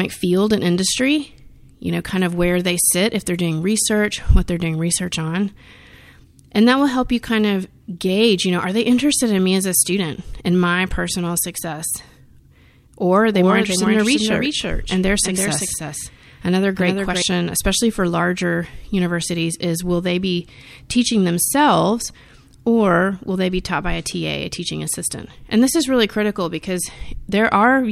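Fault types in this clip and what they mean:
Doubled audio track: from 13.34 to 17.22 s a dry, full-band echo of the speech trails about 300 ms behind, around 5 dB quieter, starting and stopping abruptly and ending just before "especially for larger universities". The likely cause is a second, slower capture path or out-of-step edit copy.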